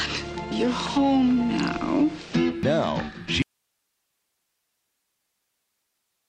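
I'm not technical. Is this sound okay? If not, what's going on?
No. At 3.42 s there's an audio dropout to a faint residue: the sound abruptly cuts out to just a quiet hiss until the end, likely from the signal being lost while the recording stayed live.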